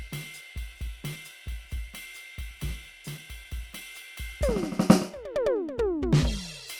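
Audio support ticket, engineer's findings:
Clock drift between sender and receiver, throughout the music: sender clock running roughly 4 percent fast. Receiver jitter buffer keeps filling, forcing small cuts to stay in step. Likely component: unsynchronised sender and receiver audio clocks.

Repeated timing corrections, 0.02 s to 6.61 s: recurring small edits, unevenly spaced, all one direction. Receiver trims short pieces to absorb the 104 percent sender rate. Buffer management compensating for drift.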